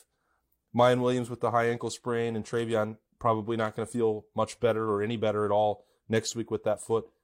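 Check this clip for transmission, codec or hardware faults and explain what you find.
No technical fault can be heard anywhere in this speech recording, and the signal stays continuous and steady throughout.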